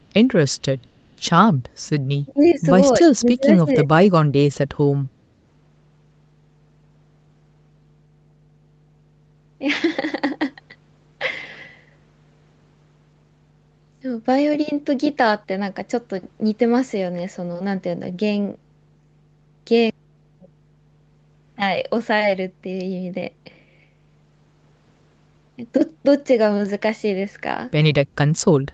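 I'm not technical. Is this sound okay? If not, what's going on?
No. A steady low buzz sits under the whole recording. This is mains hum at 50 Hz, picked up from electrical power, and it stays constant rather than coming and going.

From 2.25 to 2.43 s and from 3.01 to 4.7 s, the speech is pushed sharply quieter. This is likely speech suppressed in double talk, triggered by both call sides talking at once. The sound is turned down rather than cut off completely.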